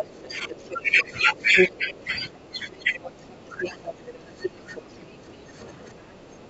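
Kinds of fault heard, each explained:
Other side's voice leaking through: The echo canceller likely failed to strip out the far-end talker that the loudspeaker played back into the microphone, so a second voice runs underneath the main speech. It sits fairly close to the main talker, roughly 5 dB below, from the start to 2.0 s and again from 4.42 to 5.33 s. It is fainter, about 10 dB down, between 2.74 and 3.94 s.
Speech suppressed in double talk: With both sides talking at once, the echo canceller likely could not tell its own talker apart from the loudspeaker echo, so it turned the whole signal down. The main voice sags by as much as about 10 dB in broken patches that add up to around three seconds within the first 4.94 s. It dips again for roughly half a second in total between 5.45 and 6.49 s.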